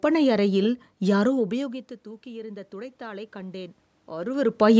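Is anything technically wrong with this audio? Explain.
Yes, there's automatic gain rising from 1.34 s to 4.75 s: the speech level dropped about 19 dB as the talker moved back, so the gain control slowly added about 6 dB, swelling voice and room noise together.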